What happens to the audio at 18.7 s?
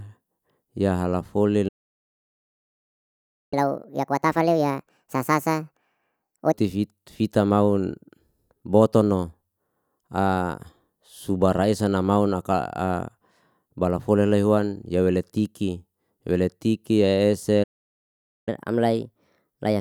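At 18.7 s the speech is in a catch-up at higher speed, running from 18.49 s to 19.80 s. The player resamples its backlog after a stall, so playback runs 1.15 times fast and pitch rises about two semitones, giving a hurried, slightly squeaky voice.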